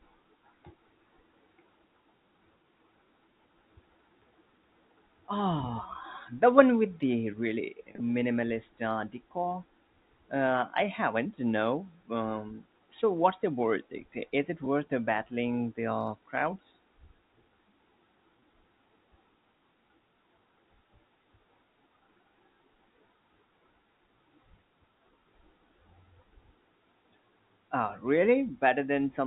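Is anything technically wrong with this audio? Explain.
Yes. Packets were lost three times, and the receiver used packet loss concealment with pitch repetition, filling each gap by repeating the last pitch period. From 7.92 to 8.00 s, right after "one with the really", about 60 ms went missing in short bursts across 80 ms, the longest lasting 30 ms. At 14.65 s, just before "battling the uh crowds", 10 ms dropped out, and at 18.41 s another 20 ms. Each gap sounds like a brief, buzzy held tone. The telephone-band G.711 coding, with nothing above 4 kHz, is not part of the fault.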